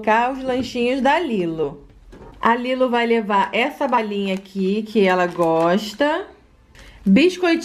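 Around 1.63 s the audio lurches forward, and it does it again at about 3.97 s. These are compressed frames skipped: whole frames never reached playback, either missing from the stream or rejected by the decoder as damaged. The first jump loses roughly 70 ms and the second roughly 40 ms, which fits about three and then two frames of 20 ms each.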